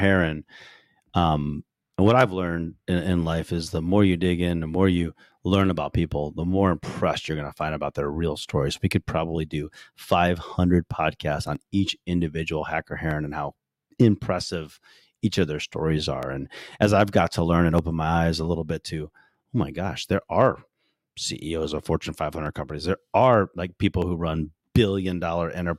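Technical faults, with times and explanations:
0.65 to 25.57 s, clock drift buffer slips: a click every 1.56 s, about fifteen, under the speech. That steady beat likely means two devices on separate clocks roughly 200 ppm apart, with the buffer creeping until about 15 samples get dropped or doubled.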